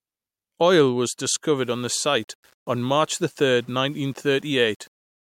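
From 1.57 s on, speech turns grainy about 35 dB down, likely low bit depth without dither; unlike steady hiss, the grit follows the voice.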